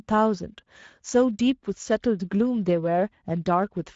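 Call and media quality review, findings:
Speex codec on the speech path, throughout: wideband mode at a middle quality setting, consistent with about 17 kbps. Too few excitation bits leave the speech plainly noisy and hoarse, with a noise-like top band and nothing above 7.7 kHz.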